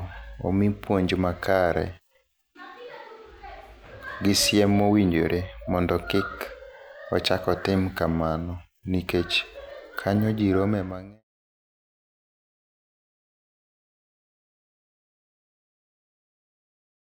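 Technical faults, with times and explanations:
No technical faults are audible.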